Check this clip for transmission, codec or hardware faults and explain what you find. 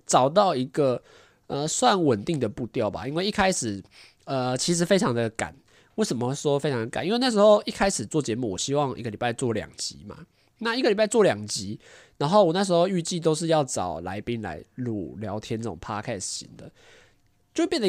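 No faults can be heard in this speech.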